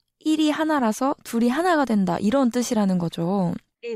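No technical faults are audible.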